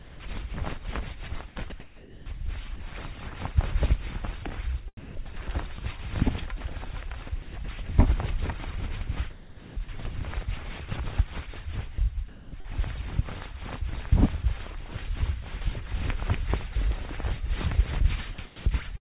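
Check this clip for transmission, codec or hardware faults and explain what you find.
Two kinds of fault appear, both from the sender's voice detector cutting out sound and substituting comfort noise; the call-codec band limit at 4 kHz is also audible.

Sound dropped by the voice detector, at 0.0–0.2 s and 6.58–6.60 s: the opening 120 ms of sound is missing, and a brief gap follows later. The detector likely judged the sound to be background and stopped sending, so the receiver filled in steady noise. On a spectrogram, the sound's structure gives way to flat, featureless noise.

Sound chopped by the voice detector, at 1.48–2.8 s, 4.97–5.39 s, 7.42–7.88 s, 9.30–9.88 s, 11.94–12.66 s and 18.34–18.66 s: the detector likely toggled repeatedly, so sound choppily alternates with synthetic noise for up to 600 ms per stretch. The waveform shows abrupt level steps between real and flat noise segments.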